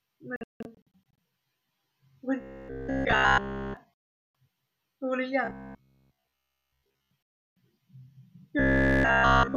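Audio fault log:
0.36–7.38 s, digital broadcast dropout: the receiver mutes at 0.36–0.87 s in scattered holes totalling about 408 ms, longest 168 ms, then at 3.94–4.35 s and 7.29–7.38 s. Corrupted or missing frames are silenced until clean ones return, and the programme audio in each gap is gone.
2.41–9.57 s, robotic sound from repeated short buffers: at 2.41–3.77 s, 5.45–7.11 s and 8.59 s to the end, the sound becomes a rigid metallic buzz at 66.8 Hz across each whole span. This is likely a roughly 15 ms buffer being replayed while fresh audio is skipped.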